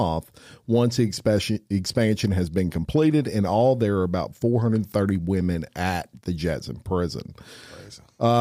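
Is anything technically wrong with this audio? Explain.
No, no technical faults heard.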